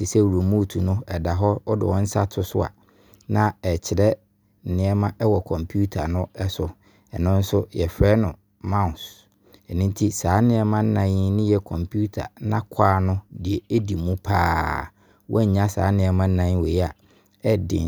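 Nothing goes wrong anywhere in this recording; there's simply no fault to point to from beginning to end.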